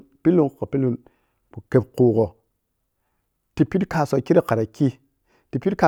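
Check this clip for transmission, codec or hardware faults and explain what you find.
Listening through the speech reveals nothing that points to a fault in transmission, coding or the equipment. There is nothing to report at any point in the recording.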